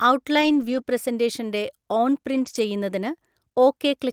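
From 0.41 to 0.79 s, and again from 2.33 to 2.59 s, a lost packet was rebuilt from error correction: the decoder played low-bitrate copies of the missing packets. There is no gap, but the sound turns rougher and noisier, showing as smeared, grainy energy on a spectrogram.

Right after the first span, at 0.81 to 0.85 s, a short concealed packet loss fills about 20 ms by extending the preceding sound. It heard as a brief smear or wobble.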